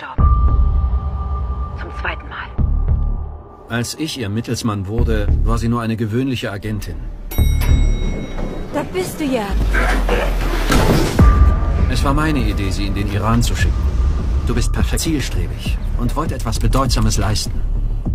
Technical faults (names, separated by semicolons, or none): damaged data in a compressed stream